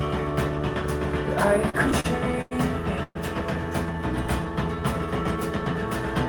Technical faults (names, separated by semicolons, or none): repeated stalls (stutter); call audio freeze; jitter buffer slow-down